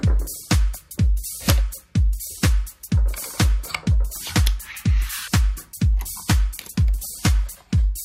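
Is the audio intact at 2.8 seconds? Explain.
Yes, at 2.8 seconds the audio is intact, with no dropout, click, distortion or other fault present at that moment.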